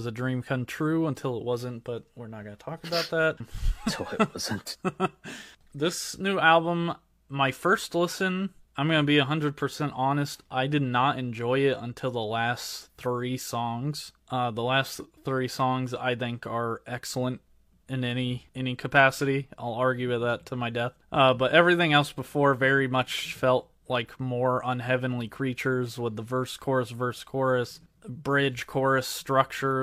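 Speech recording with no audible technical faults.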